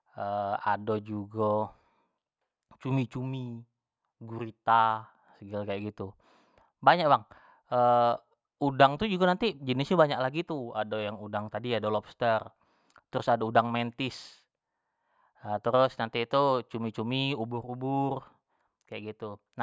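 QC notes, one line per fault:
Nothing stood out on listening to this speech recording.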